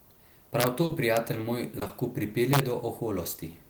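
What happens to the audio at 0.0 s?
Nothing goes wrong at 0.0 s; the audio is intact at that point.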